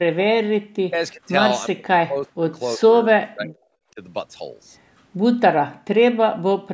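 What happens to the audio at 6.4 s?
An echo canceller likely mistook the talker for loudspeaker echo while both sides spoke at once, so this is speech suppressed in double talk. From 6.35 to 6.6 s the speech dips, falling by up to about 40 dB for around a fifth of a second in total.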